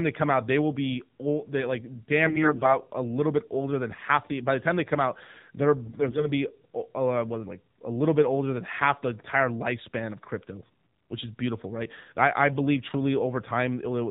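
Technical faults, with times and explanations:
Throughout: AMR narrowband mobile codec. Everything above 4 kHz is gone, so the audio sounds boxed-in and phone-like. The buzzy, synthetic edge on the speech fits a low AMR-NB mode around 7.4 kbps, where the vocal-tract model gets very few pulses per 5 ms subframe.
2.26–2.77 s and 5.86–6.30 s: AMR bit errors. Pitch and loudness hold roughly steady, but the speech turns hoarse, scratchy and gargly. That happens when the weakly protected bits in the frames get flipped, which misplaces the excitation pulses and throws off gain and spectral detail. The first burst has an error rate of around 7% against about 5% in the second.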